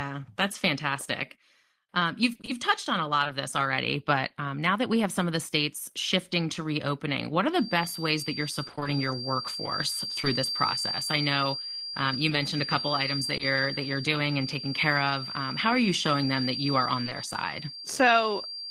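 From 2.33 to 3.31 s, just before "this already but um", the speech turns choppy. This is repeated packet loss: six gaps of up to 20 ms each, 120 ms in all, were patched by stretching the preceding sound.

From 7.47 s, right after "to reopening what are", a thin whistle near 4.7 kHz, slowly swelling and fading, sits about 10 dB beneath the speech and continues to the end. It is a feedback whistle, likely from a loudspeaker-to-microphone loop held just short of runaway.

Between 8.67 and 8.87 s the robotic repeated packet loss returns more densely. Five 20 ms gaps, 100 ms in total, mean half of that stretch is filled-in continuation rather than real audio, so the speech sounds broken.

Brief smears or wobbles follow at 10.21–10.25, 12.29–12.33, 13.37–13.41, 17.05–17.09 and 17.09–17.13 s. Each is a short concealed packet loss: 20 ms never arrived, so the receiver extended the previous sound and blended back into the real signal.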